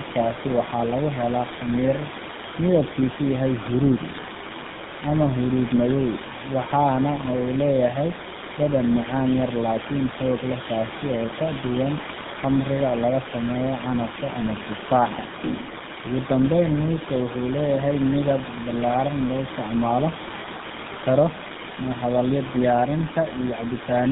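Throughout, the speech sounds rough, muffled and warbly, with nothing above 3.8 kHz: tandem speech coding, AMR-NB at 7.95 kbit/s, then G.711, then GSM full rate, each recoding degraded output.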